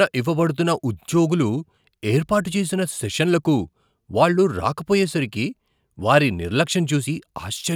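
No technical faults can be heard anywhere in this speech recording; the signal stays steady and intact throughout.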